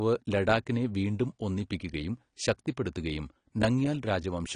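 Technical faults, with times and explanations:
Throughout, AAC compression: The speech sounds dull and smeared, with plainly audible codec damage. Nothing is heard above about 10.1 kHz, so the top of the spectrum is missing. Sibilants turn fizzy and sustained sounds warble. The likely cause is an AAC-LC encode at a low bitrate, consistent with about 32 kbps. At that rate the encoder lowers its cut-off and quantises coarsely, leaving gaps that smear the detail.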